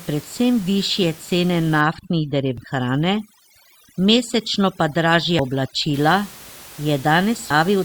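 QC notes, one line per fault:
1.81 to 5.94 s, overdone noise removal: the room noise, which sits about 22 dB below the speech outside this span, drops and breaks up into twinkling specks. A noise reduction stage set far too strong is switching individual frequency bands down or off whenever they come close to its noise estimate, taking the quieter parts of the speech along with the noise. Hiss that is merely turned down evenly would leave the speech full. This gating band by band is what produces the specks.
2.58, 5.39 and 7.50 s, damaged data in a compressed stream: three brief blips, each only a few milliseconds long, occur at these points. Corrupted bytes in the compressed data make the decoder misread those frames and lose sync, and it produces a short burst of garbage while it hunts for the next valid frame header. A dropout would leave a gap of silence, and a click would be a single clean impulse. 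The one at 5.39 s sits inside the noise-removal span.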